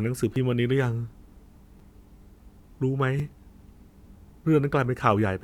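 Speech with a repeated buffer at 0.34, 1.79 and 3.19 s. A 5.8 ms piece, which fits a 256-sample buffer, replays three times, then once, then once, heard as brief clicks.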